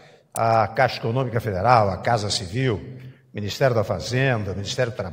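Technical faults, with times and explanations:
0.36 s, electrical switching spike: a sharp snap peaking around -10 dBFS sits on top of the sound without interrupting it, likely an arc from a nearby switch.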